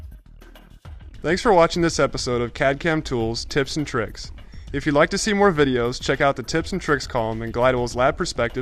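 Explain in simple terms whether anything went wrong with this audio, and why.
Nothing went wrong here: the audio shows no technical problems at any point.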